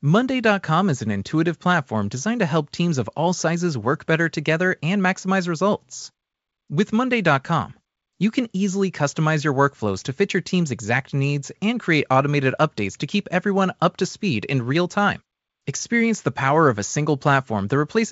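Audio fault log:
No faults heard.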